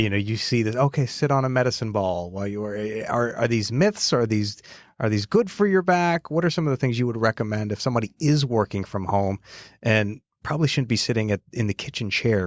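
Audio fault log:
No faults heard anywhere in this speech recording.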